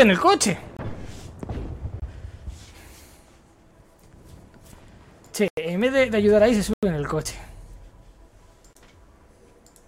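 Block of digital silence at 0.77–0.79, 2.00–2.02, 5.48–5.57, 6.73–6.83 and 8.73–8.75 s: samples are replaced by zeros with no fade, so the sound drops out and returns abruptly. The 23 ms gaps fit a 1024-sample buffer. The 93 ms gaps, which fit 4096 samples, are heard as short holes.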